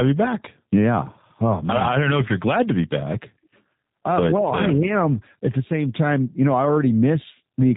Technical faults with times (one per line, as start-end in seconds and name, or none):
0.00-7.76 G.729 codec